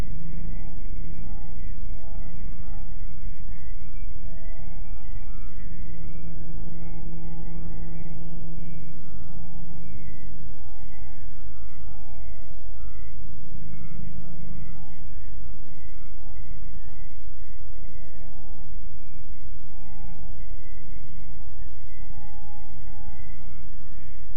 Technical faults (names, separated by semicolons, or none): none